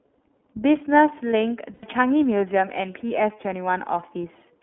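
Throughout, the speech sounds band-limited and slightly rough and synthetic, confined to roughly 300 Hz to 3.5 kHz, with plainly audible iLBC codec damage from coding that fits its 30 ms, 13.33 kbps mode. From 1.74 to 1.83 s, a held, faintly buzzy vowel replaces the speech for about 90 ms. This is lost iLBC frames, which fits three dropped 30 ms frames concealed by repeating the last pitch cycle, with clean recovery immediately after.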